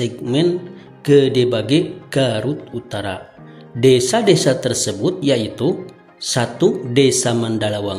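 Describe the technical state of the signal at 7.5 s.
At 7.5 s the signal is intact, with no audible fault at that point.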